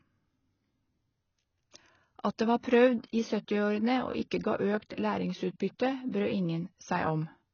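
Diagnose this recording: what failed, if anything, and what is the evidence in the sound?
AAC compression, throughout the speech: the band stops dead above about 6.7 kHz, and sibilants turn smeared and warbling, the heavy damage a low-bitrate codec leaves. The likely cause is AAC-LC quantising spectral lines coarsely at a rate that fits roughly 16 kbps, cutting the top.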